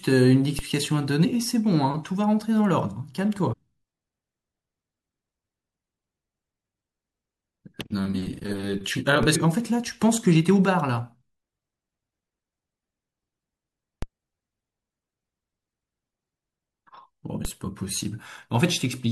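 At 0.59 s the waveform's zero line jumps to a new offset, a DC step, and a high-pass around 20 Hz then drains it back toward zero. What you hear is a single low thump under the speech, which carries on unaltered through it. The same step and decay recur at 9.23 s, 14.02 s and 17.45 s.

At 1.24 s the decoder fails to play a short run of compressed frames, whether they were absent from the stream or rejected as corrupt. With frames of 21.3 ms, this compressed frames skipped event drops roughly four frames, about a tenth of a second of speech. A longer skip of around seven frames, about 150 ms, occurs between 3.52 and 3.54 s, and another of the same size at 9.34 s, just after the 9.23 s DC step.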